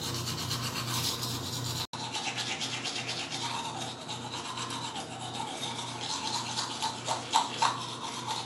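A recording of everyday sounds that drops out for about 80 ms at 1.85 s and comes back duller, with nothing above 11.4 kHz, a new noise floor roughly 35 dB down, and no real level jump, right through to the end. That's most likely the input switched to a poorer device.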